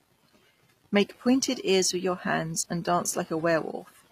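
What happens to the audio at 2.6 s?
At 2.6 s the speech carries the same damage heard across the whole clip. The top end is bright but sounds synthetic, and s sounds come out gritty and lispy. Nothing is present above 15 kHz. The likely cause is HE-AAC compression at a low rate, which fits about 24 kbps. The codec keeps only the lower spectrum and fakes the treble by copying lower bands upward. Those copied harmonics do not line up with the real ones.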